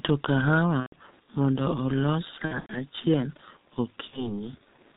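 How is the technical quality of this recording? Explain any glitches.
The technical quality is poor. The speech passes through a heavily degraded low-rate codec and has three dropout glitches.

The G.723.1 codec runs throughout. Its slow 30 ms frame updates and low bitrate, fitting roughly 6.3 kbit/s, leave the audio muffled and hoarse. A spectrogram would show nothing above 4 kHz and smeared consonant onsets.

VoIP packet loss concealed by the speech codec occurs at 0.80–0.93 s (just before "mondo olos"), at 2.45–2.84 s (just after "kahawa mondo olos", with gaps scattered across about 240 ms), and at 4.07–4.43 s. The decoder repeats its last pitch and filter with falling gain, producing a buzzy tone or coloured noise that fades. On a waveform this appears as decaying, overly regular cycles. On a spectrogram it shows as frozen, smeared harmonics.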